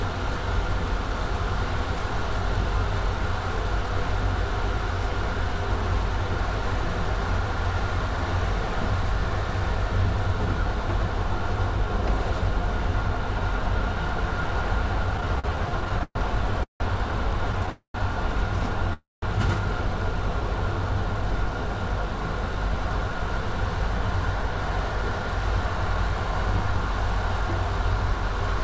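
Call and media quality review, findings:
Repeated stalls (stutter), 15.14–16.83 s: jitter buffer repeatedly draining as packets arrive late. Over a dozen short concealed gaps, longest 169 ms, about a quarter of the span filled, so the audio drags and stutters.

Call audio freeze, 17.70–17.97 s and 18.93–19.25 s: likely late packets emptying the jitter buffer. Last sound is extended and fades to brief silence, inserting 240 ms and 290 ms of delay.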